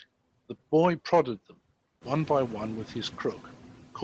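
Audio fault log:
Throughout: noise suppressor artifacts. Steady background is cut by about 14 dB frame by frame, so the spectrogram's noise floor looks patchy, sinking between speech bursts.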